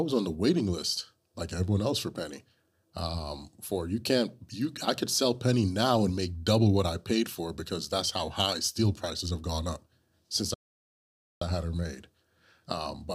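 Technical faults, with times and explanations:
10.54–11.42 s: playback stall. Speech goes silent for 0.87 s after "have gone up since", resuming at "I had her made"; likely an emptied playback buffer.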